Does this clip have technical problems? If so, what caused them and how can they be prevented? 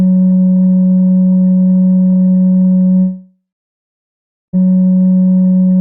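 Yes. From 2.99 to 4.59 s the music trails into a fading buzz and then silence, likely a long network dropout. Unlike a brief packet loss, the missing 1.5 s never comes back. A more stable connection with redundancy or retransmission would prevent it.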